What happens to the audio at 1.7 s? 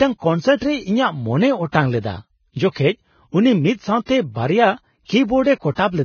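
A transform codec spread its quantisation noise across a whole block, and a sharp onset near the end of that block let the noise meant for the loud part leak into the quiet just before it. The result is pre-echo from 1.68 to 1.74 s, a smear about 57 ms long: a brief hiss runs ahead of the attack leading into "ᱞᱮᱫᱟ ᱡᱚᱠᱷᱮᱡ ᱩᱱᱤ ᱢᱤᱫ", and the onset itself sounds softened rather than crisp.

That moment sits inside heavy coding damage that runs through the whole clip, likely from Vorbis compression at a very low rate, around 17 kbps. The encoder dropped everything above 6.5 kHz and quantised the remaining treble so coarsely that fine detail turned into noise of similar energy. At 1.7 s, as everywhere else, the speech sounds dull, hissy and grainy, with roughened tone and blurred attacks.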